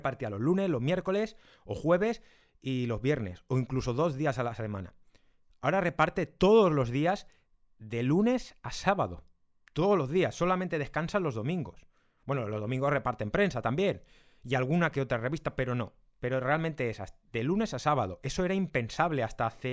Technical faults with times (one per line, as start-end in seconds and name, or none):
none